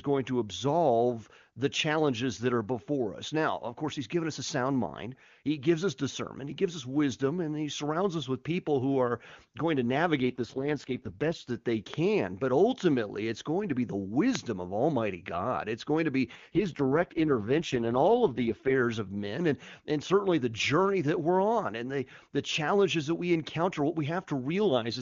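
From 10.23 to 11.50 s there is an AMR rate drop. The speech turns rough, raspy and synthetic, which fits the codec falling from 23.85 to 6.6 kbit/s on a weak link.

At 11.94 s, after "that they", a loud pop jumps about 15 dB above the speech. Another hits at 14.35 s, after "going to be the", about 20 dB above. The likely cause is a sudden voltage pulse from a plug, switch or static.

From 16.35 to 18.75 s, after "going to be" and before "of men and and", the same AMR rate drop returns, with the same raspy roughness.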